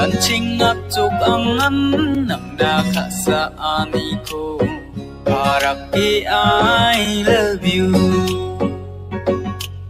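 A speech-tuned noise suppressor stays active throughout, treating steady tones and decays as noise, so the level swings by around 10 dB and the sound pumps and thins. Its sound cuts pull sustained passages down about 7 dB at 0.74–0.92 s and 2.37–2.60 s, and at 5.75–5.93 s. At 4.71–5.26 s and 8.48–9.89 s the drop reaches about 8 dB. At 2.15 s the device replays its last buffer, roughly 2.7 ms long (fitting a 128-sample buffer), two extra times, heard as a brief buzzing click. At 7.05 s a repeated buffer plays three extra times.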